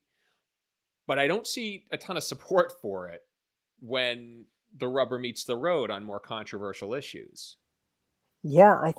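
Nothing stood out on listening to this speech recording.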